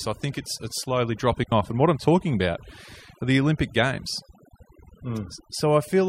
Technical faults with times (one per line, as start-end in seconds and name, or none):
0.00-6.09 overdone noise removal
1.44-1.52 digital wireless dropout